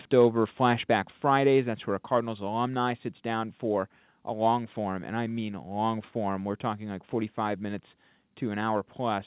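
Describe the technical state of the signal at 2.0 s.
At 2.04 s the speech and background drop together by about 2 dB in a single step and stay there. This is likely a microphone volume stepped down by the call software's input gain control, within a call-path signal band-limited to 4 kHz.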